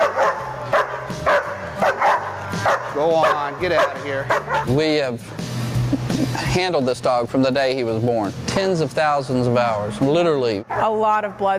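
The input gain was likely set far too high, with a fast limiter or compressor clamping the level down every time a loud sound arrived. Across the whole clip this causes gain pumping: the level is pulled down under loud moments, a swing of roughly 20 dB. Loud and quiet passages sit unnaturally close in level, so the audio sounds squashed.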